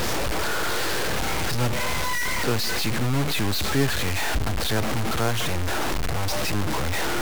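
Low bit depth without dither runs through the whole clip. The speech was likely cut to about 3 bits by plain truncation, so the error tracks the signal, giving grainy, gritty distortion roughly as loud as the speech itself, with quiet stretches sputtering or dropping out.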